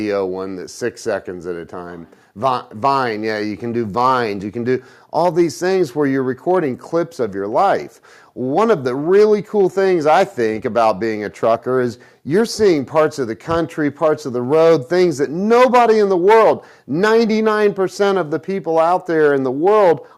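No technical faults are audible anywhere in the recording.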